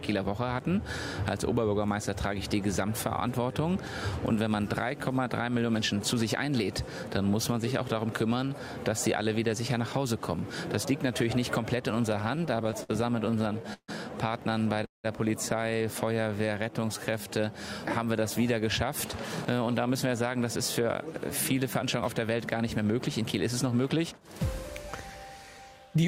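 Repeated stalls (stutter) occur from 11.95 to 12.91 s and again from 13.31 to 13.90 s. Packets kept arriving too slowly, so the jitter buffer repeatedly ran dry and the receiver stretched the last sound to bridge each wait. The first stretch has 12 short hitches totalling 166 ms, none longer than 55 ms. The second has 7 hitches totalling 212 ms, one lasting 147 ms, so it drags more heavily. Nothing is lost, but the audio lurches.

A call audio freeze follows from 14.85 to 15.06 s. The sound hangs for 188 ms, a brief continuation that fades into about 150 ms of silence, then resumes where it stopped, about 188 ms later than before. The likely cause is delayed packets emptying the buffer.

Jitter buffer slow-down runs from 16.16 to 17.28 s. The receiver repeated tiny pitch-period slices to rebuild its reserve, adding 137 ms. Playback drops to 88% speed at unchanged pitch, so sounds draw out and may warble slightly.

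Jitter buffer speed-up spans 19.46 to 24.68 s. With surplus audio queued, the receiver trimmed short pitch-period pieces, removing roughly 0.4 s overall. The audio runs at 108% speed without any pitch change, sounding hurried.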